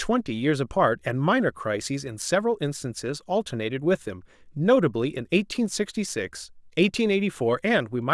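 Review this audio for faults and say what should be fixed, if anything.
Nothing in the signal needs fixing; it holds steady throughout, with no technical fault audible anywhere in the recording.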